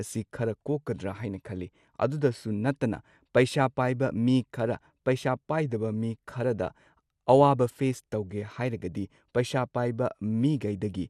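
Throughout the speech, the sound is dull with a gurgling, granular edge, likely MP2 compression at a low bitrate, around 80 kbps, switching off upper sub-bands and coarsely quantising the rest.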